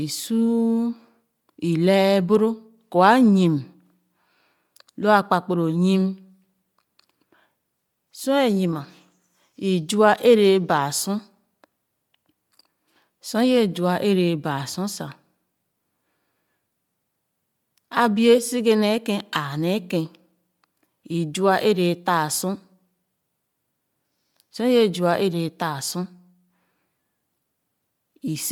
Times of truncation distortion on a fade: none

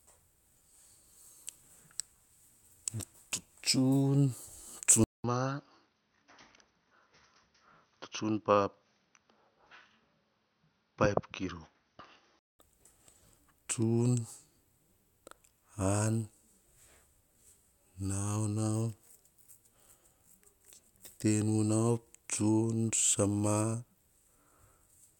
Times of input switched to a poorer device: 5.04-12.59

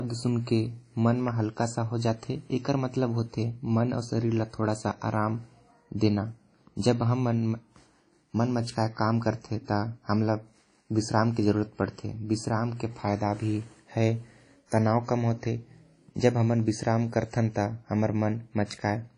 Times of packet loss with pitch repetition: none

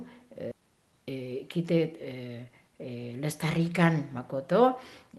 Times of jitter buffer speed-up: 0.60-1.79

